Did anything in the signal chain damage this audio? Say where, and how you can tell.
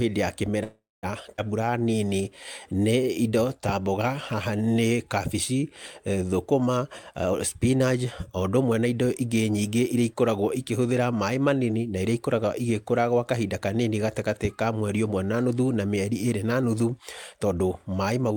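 Yes. Between 0.63 and 1.05 s the sound stalls for about 0.39 s, trailing into roughly 0.22 s of silence, then resumes exactly where it stopped. This is a call audio freeze, likely from delayed packets draining the jitter buffer. Unlike a skip, nothing is lost.

At 1.37 to 1.40 s there is a skip ahead at the network or jitter-buffer stage. Roughly a tenth of a second of speech is dropped, and the two sides are butted together with only an 11 ms join. The gap is brief, but content vanishes, the opposite of a freeze.

From 1.60 to 2.22 s the jitter buffer slow-down stretches the speech to 85% speed, adding 101 ms by repeating pitch periods to rebuild its reserve. Pitch stays unchanged, which rules out a tape-style or sample-rate slowdown.

From 6.78 to 10.15 s a jitter buffer speed-up runs the speech at 111% as the buffer trims excess delay, cutting roughly 0.4 s in small pitch-period pieces. 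The speech sounds hurried at the same pitch, unlike a resampling error, which would also raise the pitch.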